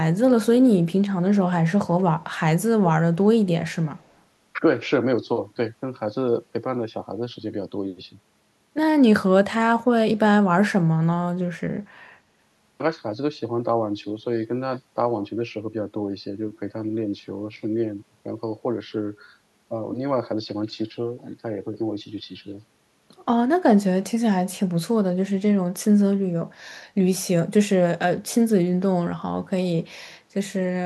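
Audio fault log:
2.2–2.39 s and 3.99–4.14 s, echo leak: a very faint copy of the speech trails it by 137 ms, likely from loudspeaker pickup that the far end's echo canceller missed.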